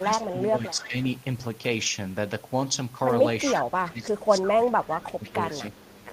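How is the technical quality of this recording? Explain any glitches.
The recording has two recurring faults of the kind typical of a hands-free call, both tied to the echo canceller.

Speech suppressed in double talk occurs from 0.00 to 0.96 s, 3.56 to 4.56 s and 4.87 to 5.54 s. The level dips by up to about 15 dB over roughly half to three-quarters of a second each time. This is likely the canceller ducking the talker while the far side also speaks.

Echo leak appears at 0.75 to 0.88 s, 3.48 to 3.62 s, 5.02 to 5.30 s and 5.79 to 6.04 s. A copy of the speech returns 337 ms late, at about 10 to 35 dB below the direct sound. This is likely residual loudspeaker pickup that the canceller failed to remove.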